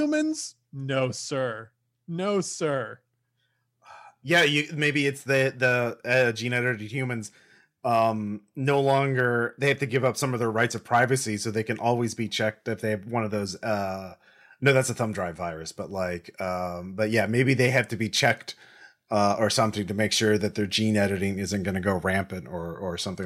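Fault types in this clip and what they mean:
dropped samples: sharp clicks at 2.55 s and 8.27 s, just before "no longer they have", likely a few missing samples making the waveform jump.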